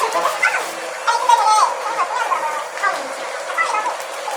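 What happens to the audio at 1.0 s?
At 1.0 s you're hearing the audio read two samples at a time, and it doesn't start there; it runs the whole way through. Pairs of samples are being taken as one frame, as if the stream had two channels or samples twice as wide, so everything plays at 2x speed and a full octave up, 12 semitones.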